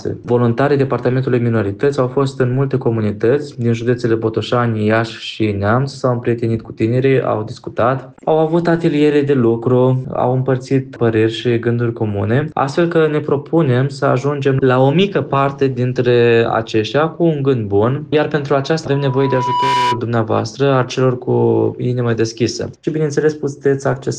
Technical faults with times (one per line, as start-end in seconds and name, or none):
18.91-20.02 loudspeaker feedback squeal